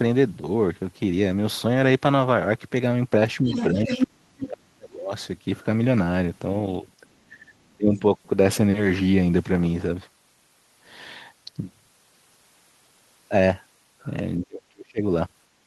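Speech suppressed in double talk first appears at 3.41 to 3.51 s, a brief dip of about 10 dB. Over the same moment, the other side's voice leaks through from 3.46 to 3.65 s, roughly 10 dB below the talker: a second voice that the echo canceller likely failed to subtract from the loudspeaker pickup. Suppression returns much harder from 3.73 to 5.13 s. For about a second the talker is pulled down by as much as about 35 dB. Inside that stretch, from 3.89 to 4.06 s, the leaked voice comes through about as loud as the talker. With both sides active at once, the canceller likely could not separate its own talker from the echo and turned everything down. Further suppression dips occur at 7.22 to 7.55 s (about 15 dB) and 7.77 to 8.02 s (about 20 dB). A final deep one, about 35 dB, runs from 14.38 to 15.03 s.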